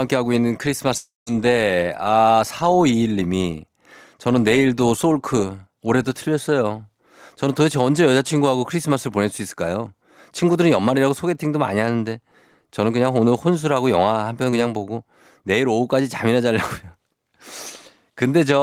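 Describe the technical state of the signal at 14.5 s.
At 14.50 to 14.54 s there is short concealed packet loss: about 20 ms never arrived, and the receiver extrapolated the preceding speech to fill it. It sounds like a brief smear rather than a silent dropout.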